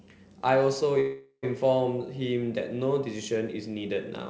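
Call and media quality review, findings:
Call audio freeze, 1.00–1.45 s: sound stretched into a fading buzz, brief silence before resuming, about 0.43 s added delay, nothing lost. Likely jitter buffer underrun from delayed packets. Band limited to 8 kHz.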